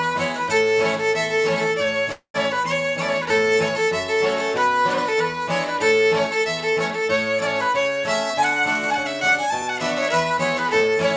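From 2.12 to 2.36 s there is a call audio freeze: the sound stretches into a fading buzz or hiss, then about 90 ms of silence, likely from delayed packets emptying the jitter buffer. Nothing is lost; the audio resumes where it stopped, 222 ms late. From 8.34 to 10.38 s a jitter buffer speed-up trims small pitch-period slices to shed roughly 0.2 s of backlog, so the sound runs at 108% speed, hurried but at unchanged pitch.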